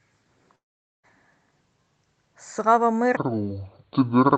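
A long network dropout runs from 0.55 to 1.05 s, likely caused by packets failing to arrive in time. About 480 ms of speech is missing. The receiver briefly stretches the last sound into a fading buzz, and for most of that gap, roughly 450 ms, only silence remains. The speech then resumes further on, with the lost portion simply gone rather than delayed.

A section at the wrong speed runs from 3.17 s to the end of the clip. This is likely because that stretch was played against the wrong clock. It runs at 0.587 times its proper rate, so speed and pitch drop together. The voice sounds slowed and dragged, and about ten semitones too deep. Above 8 kHz there is no content, which is consistent with the Opus call path's band limit.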